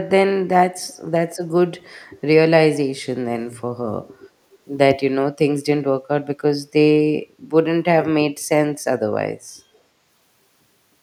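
At 0.76 to 0.95 s and again at 9.74 to 9.78 s, a faint echo leak trails the speech by 316 ms, around 35 to 40 dB down. A far-end loudspeaker's echo canceller likely let residual pickup through, returning these brief scraps.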